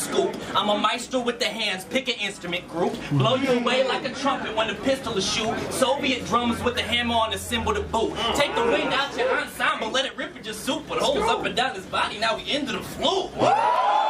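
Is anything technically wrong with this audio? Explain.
Yes. From 0.53 s to 13.76 s there are clock drift buffer slips. A click comes every 1.02 s, about fifteen in total. The likely cause is two clocks disagreeing by around 200 ppm. The buffer between them overflows or runs dry, dropping or repeating a few samples each time.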